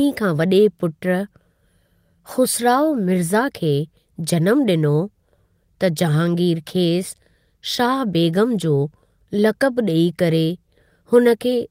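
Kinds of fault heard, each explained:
No audible faults detected.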